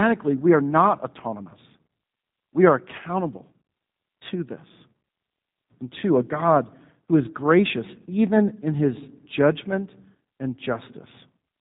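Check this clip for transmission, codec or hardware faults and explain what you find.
One codec fault is present, and it runs through the whole clip. The speech has been through G.729 coding, and the damage is plainly audible from start to finish. Nothing above 3.8 kHz survives. The codec does not carry the waveform itself. It sends a vocal tract filter, a pitch predictor and a few pulses per frame, and the receiver rebuilds the speech from those. The result sounds muffled, slightly rough and synthetic. This fits the 8 kbit/s G.729A variant.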